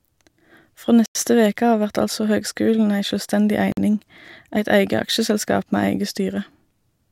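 The speech drops to dead silence for 93 ms at 1.06 s and 51 ms at 3.72 s, then resumes; likely a Bluetooth stall, with the receiving buffer running dry.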